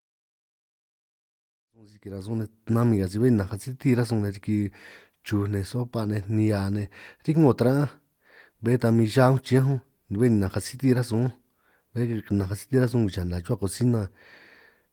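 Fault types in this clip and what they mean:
Nothing stood out on listening to this speech clip, apart from the level rising gently over the opening seconds as an editor's fade-in would, with no click or hard edge.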